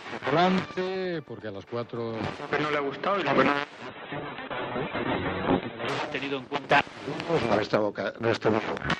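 At 3.89 s the stream drops to a lower bitrate for two seconds, until 5.89 s. The quality switches abruptly with no gap: everything above about 4.1 kHz vanishes and the sound turns dull, which fits a fall from roughly 64 to 8 kbit/s Opus.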